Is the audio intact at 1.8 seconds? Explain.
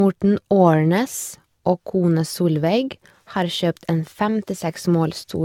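No. Generation loss affects 1.8 s and the whole clip: likely repeated re-encoding, perhaps seven passes, consistent with AAC at 96 kbit/s, leaves swirly, hollow, smeared speech with nothing above 17 kHz.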